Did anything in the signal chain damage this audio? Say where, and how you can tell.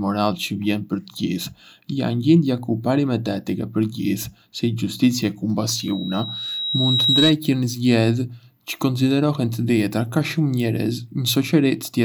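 Yes. Between 5.69 and 7.37 s a loudspeaker feedback squeal appears, which points to the acoustic loop between microphone and loudspeaker rather than any digital stage. A single tone at 3.8 kHz swells over roughly one and a half seconds until it sits a little louder than the speech. A steady electrical whine would hold a fixed level. This one builds from nothing as the loop's gain at that frequency passes one, then stops.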